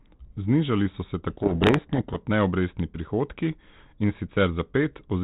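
Right after "so se", from 1.3 to 2.19 s, there's a codec payload misread: the two ends disagree on the bit order of the G.726 code words, so the decoder unpacks them wrongly and the speech drowns in harsh distortion until the packing lines up again, back to lightly damaged 32 kbit/s G.726.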